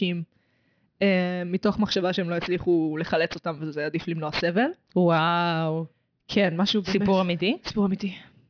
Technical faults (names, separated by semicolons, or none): aliasing